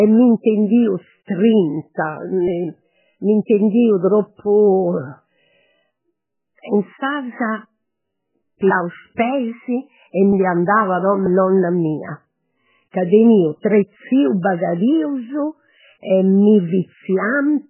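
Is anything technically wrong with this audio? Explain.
Yes, there are two faults. Throughout the speech, nothing is audible above 3 kHz, and the sound is heavily watery and swirly. This is likely MP3 compression at a very low bitrate, around 8 kbps. Starved of bits, the encoder drops weak frequency lines frame by frame and cuts the treble. The flickering, swirling texture is what sets this apart from a simple low-pass filter, which would only dull the sound.

There is also pre-echo at 1.94 to 1.97 s, 9.16 s, 12.91 to 12.94 s and 13.61 to 13.64 s, lasting between 16 and 35 ms. The codec spreads noise across a whole block, so a short hiss runs ahead of each sharp onset and softens it. Unlike a true echo, the smear comes before the attack, not after it.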